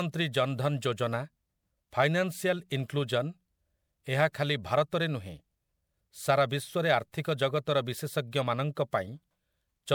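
Generation loss runs through the whole recording. The speech sounds swirly, smeared and hollow, and consonant attacks blur. The likely cause is repeated MP3 re-encoding, around four passes, each adding fresh noise and spectral holes. The character is worse than 128 kbit/s alone would explain, with nothing above 21.1 kHz.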